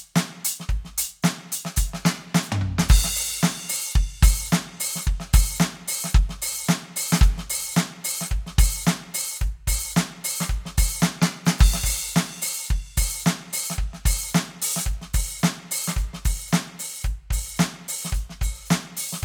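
A music recording with no technical fault to report anywhere in it. There is nothing that calls for a time or a cause.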